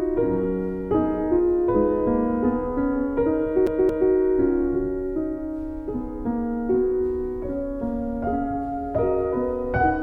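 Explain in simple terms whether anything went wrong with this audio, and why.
A CD stuck on one turn: from 3.67 to 4.12 s, a scratch makes the laser jump back to the same spot on the disc. The same 0.23 s slice of audio plays twice, with a tiny mute at each jump, giving a quick, even stutter.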